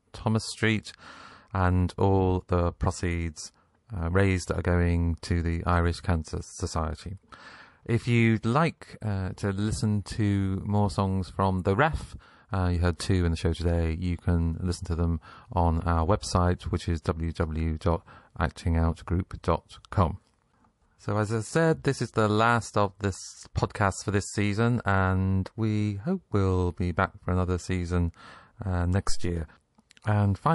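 A speech recording carries MP3 compression damage throughout, plainly audible as a watery, swirling quality with dulled treble and chirpy, metallic sibilants. That sound fits a low bitrate of roughly 48 kbps, likely the cause, starving the encoder so it cuts the high end and lets weak frequency lines flicker on and off between frames. Unlike simple low-pass filtering, the damage moves and warbles rather than just sounding muffled.

Pre-echo appears twice. At 12.97 to 12.99 s, between "uh you heard" and "two in the show", a hiss rises about 12 dB and spreads roughly 27 ms ahead of a sharp onset. A second, briefer instance sits at 17.8 s, about 19 ms long and rising about 11 dB. The encoder evidently stayed on long transform blocks, around 48 ms, so noise meant for the loud attack smeared backward into the silence before it. What marks it as pre-echo rather than background noise is that the hiss arrives only just before the transient and then disappears into it.

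A phantom power thump follows "for another season uh" at 29.09 to 29.34 s. It is a deep, low-frequency bump that dies away over about 57 ms, caused by a supply voltage switching on a live input and the step passing through the coupling capacitors. Unlike a handling bump or plosive, it has no acoustic texture, only a clean electrical pulse.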